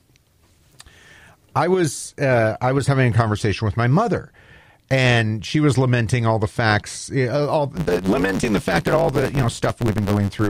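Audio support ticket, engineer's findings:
Block size mismatch (truncated), 7.73 s to end. 100 Hz buzz; speech runs 1.16x fast. Upstream stage writes longer blocks than downstream reads, so the tail of each is dropped. Fits a 512-sample write block. Check buffer handoff.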